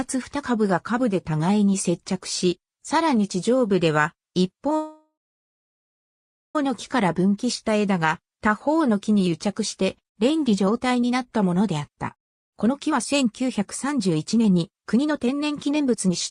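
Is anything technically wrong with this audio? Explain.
Yes, there are two faults. From 4.76 to 6.56 s, a call audio freeze stretches the last sound into a fading buzz, then about 1.4 s of silence. It is likely that delayed packets emptied the jitter buffer. From 8.38 to 16.13 s, a jitter buffer speed-up makes the sound run hurried at unchanged pitch, about 116% speed. The receiver trims pitch-period slices, cutting roughly one and a half seconds of backlog.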